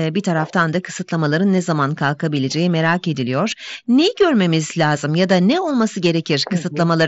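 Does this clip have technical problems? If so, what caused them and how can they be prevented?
Yes. Concealed Bluetooth headset packet loss occurs at 1.57 s, between "bir taraftan da kısıtlamaların" and "zaman kalkabileceği merak ediliyor", and at 3.51 s, just after "zaman kalkabileceği merak ediliyor". Packets between the headset and the phone were lost, and the receiver filled the gaps, about 15 ms and 7.5 ms, with closely matching slices of the preceding waveform. That makes the single-frame dropout at 3.51 s nearly inaudible. The audio travels over the wideband mSBC headset codec, which is working normally. Keeping the headset close to the phone, with a clear line of sight and little 2.4 GHz interference nearby, would prevent these losses.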